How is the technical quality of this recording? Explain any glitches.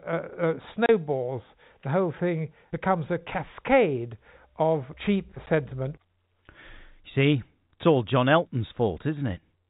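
The speech has two short dropouts from packet loss filled with silence. At 0.86 to 0.89 s, a 30 ms hole cuts the sound, which fits three lost 10 ms packets. At 5.46 s, just after "a cascade of cheap", a 10 ms gap appears, likely one lost packet. The receiver inserts silence in both places. Both holes have abrupt edges. The G.711 telephone coding is audible as a band limit at 4 kHz.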